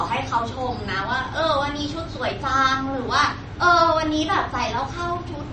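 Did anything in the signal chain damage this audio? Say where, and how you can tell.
Yes, at the codec stage, likely MP3 compression: throughout, nothing above 8.4 kHz, plus watery, swirly artefacts that a plain low-pass filter wouldn't add, consistent with roughly 32 kbps.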